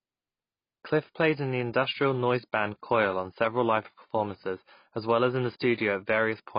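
From start to finish the speech is band-limited, with nothing above about 5.1 kHz, and it sounds dull and smeared, with a warbling, fizzy texture on sibilants and held vowels. This is likely AAC compression, AAC-LC at heavy settings that fit a bitrate around 16 kbps. With so few bits per frame, the encoder drops the upper band entirely and quantises the remaining spectral lines coarsely, leaving gaps that shift from frame to frame and produce the unstable, swirling artefacts.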